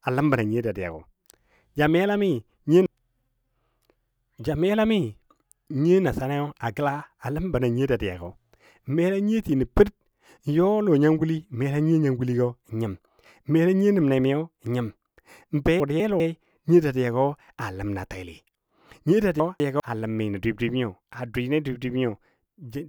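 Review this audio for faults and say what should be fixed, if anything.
Two spots with chunks out of order, at 15.8–16.2 s and 19.4–19.8 s: a 200 ms chunk lands one slot late, so the speech jumbles briefly. Sequence-number the chunks and reorder them in a jitter buffer before playback or writing.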